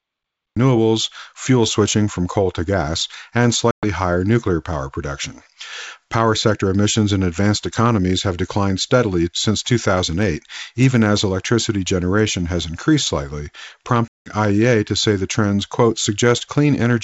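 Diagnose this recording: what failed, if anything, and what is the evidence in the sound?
The failure is at the recording or storage stage: capture began late, and the speech is cut off at the start. The clip opens on digital silence, and at 0.57 s the speech starts mid-sound, with no natural attack and no fade-in. A gate or fade would shape the onset. Here the jump from silence is abrupt. That points to a stream that joined the sound already in progress, not to processing that trimmed quiet.

The network stage caused packet loss on an ADPCM call, heard twice. From 3.71 to 3.87 s about 120 ms of speech is missing, which fits roughly ten lost packets. From 14.09 to 14.32 s about 180 ms is missing, which fits around twenty. Each gap is a hard-edged hole of silence. Speech returns unsettled, with level or distortion off for some tens of milliseconds while the G.722 decoder's predictor and step size recover. 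A plain dropout would resume cleanly. A concealing codec would fill the gap rather than leave it empty.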